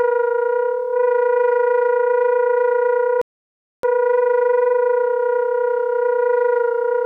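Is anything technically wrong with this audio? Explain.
Yes. A rebuffering stall hits at 3.22 s: the sound cuts to silence until 3.83 s, then picks up exactly where it stopped, as the player ran dry of downloaded audio and waited for more. Unlike a dropout, nothing is skipped; about 0.62 s is simply added.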